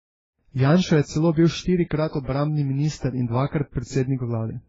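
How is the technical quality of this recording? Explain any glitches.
The recording is degraded by stacked compression damage that runs through the whole speech clip.

Transcoding between lossy codecs: from start to finish, nothing is present above 7.6 kHz, and the texture shows two different sets of coding artefacts layered together. The likely cause is a low-rate AAC-LC encode, around 16 kbit/s by its character, re-encoded to Vorbis at a similarly low rate. The second encoder wastes bits reproducing the first one's artefacts, then adds its own, and the lowest cut-off in the chain stays, so the speech sounds dull.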